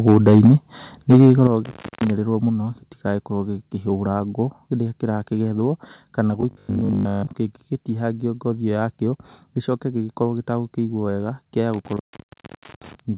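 A speech clip carried over a narrowband call path, with nothing above 4 kHz, consistent with G.711 mu-law telephony. It has four kinds of fault. From 0.07 to 0.52 s and again from 1.1 to 1.47 s, the loudest syllables take on a harsh, crackling edge. This is likely microphone overload, with peaks about 5 and 6 dB past the converter's limit and roughly 7 percent of samples flattened. The distortion rides on the voice itself rather than replacing it, which separates it from a dropout. Sudden drops in overall level, with the background falling along with the voice, come at 0.47 s (about 2 dB), 1.47 s (about 7 dB), 2.49 s (about 2 dB) and 9.66 s (about 1 dB). These are likely microphone volume stepped down by the call software. The first two land right at the ends of the clipped passages, and the level stays lower afterwards instead of recovering like a fade or a momentary dip. Intermittent contact cuts the sound from 1.65 to 2.10 s, open for about 260 ms, and from 11.74 to 13.0 s, open for about 820 ms. 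Each gap has crackle at its edges and only faint hiss inside, unlike a clean digital mute. From 6.41 to 7.31 s the sound turns into a rigid, metallic buzz at 50 Hz that still roughly follows the speech. This is likely robotic sound from repeated short buffers. A fixed 50 Hz pitch fits a 20 ms segment being repeated, with most of the real audio in that span skipped. That steady pitch is what sets it apart from ordinary codec roughness or packet-loss concealment.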